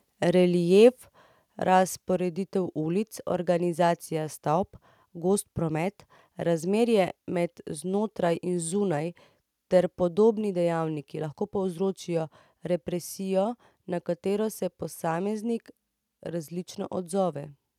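At 0.84 to 0.86 s, a brief microphone overload occurs, likely because the input gain was set high enough that this peak ran about 1 dB past the converter's limit. Its flattened tops, touching roughly 2 percent of samples, give a short, harsh crackle.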